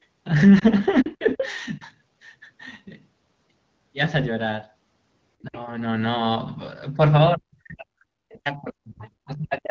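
At 0.59 to 0.64 s there is a brief dip or warble in the speech, a single lost AMR speech frame of about 20 ms. Errors on the radio link corrupted that frame, and the decoder bridged it by repeating the previous pitch and vocal tract settings at reduced level.

From 1.03 to 1.41 s the talker's level sags slightly, and at 1.78 to 1.82 s, 5.44 to 5.55 s and 6.94 to 7.00 s it ducks more sharply. From 7.34 s to the end it is pushed far down, by something like 40 dB at worst. This is speech suppressed in double talk. Both parties were likely speaking at once, and the echo canceller, unable to tell the talker from the loudspeaker echo, attenuated everything.

Overlapping those dips, a second voice bleeds in. From 1.05 to 1.45 s it is nearly as loud as the talker. At 1.81 to 1.90 s and 9.01 to 9.28 s it is only a faint trace. This is the other side's voice leaking through: the far end was likely played on the talker's loudspeaker and not fully cancelled from the microphone.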